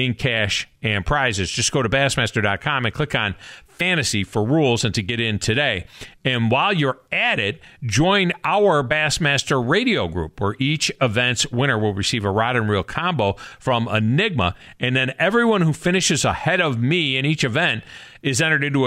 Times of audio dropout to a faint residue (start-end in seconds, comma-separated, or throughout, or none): none